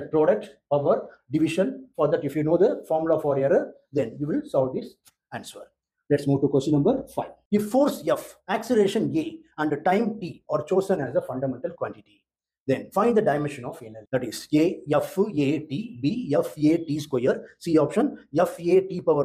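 Nothing stood out on listening to this audio.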